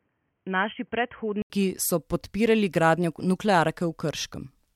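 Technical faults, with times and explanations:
0.0–1.5 s, input switched to a poorer device: the opening sounds dull and boxy with nothing above 3.2 kHz, about 5 dB quieter with faint extra hiss, then an 80 ms gap before full clarity returns at "so podpirali gradnjo", likely a narrowband mic handing over to the main one.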